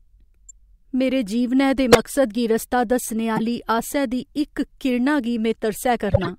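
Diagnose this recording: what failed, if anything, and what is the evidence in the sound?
The codec is what failed here: four spots of corrupt frame decoded, where damaged frames got played instead of concealed. Listen at 0.49–0.51 s just before "मेरे जीवनै दे मकसद" (faint), 1.92–2.00 s between "मेरे जीवनै दे" and "मकसद गी रस्ता दस्सने" (loud), 3.37–3.40 s before "आसै दी इक किरणा", and 6.08–6.30 s, a longer stretch of several frames. Flipped bits throw gains and spectral codes off, so each damaged frame sprays energy into the wrong bands as chirps and noise bursts.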